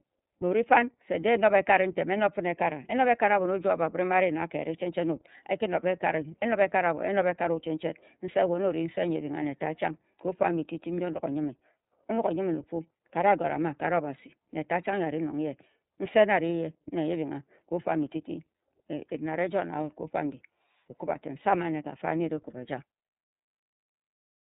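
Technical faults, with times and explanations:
Throughout, iLBC codec. Nothing above about 3.8 kHz survives, so the speech sounds narrow and telephone-like. The coding damage is plainly audible as a rough, slightly synthetic texture. Each block of sound is coded on its own, with no help from the block before. The sound points to 30 ms frames and fits a rate near 13.3 kbps.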